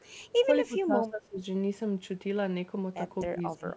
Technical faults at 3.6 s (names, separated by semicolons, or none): speech suppressed in double talk